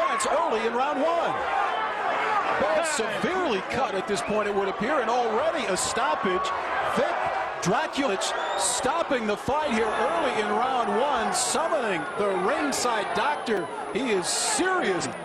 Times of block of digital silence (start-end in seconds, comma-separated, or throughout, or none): 7.91, 13.57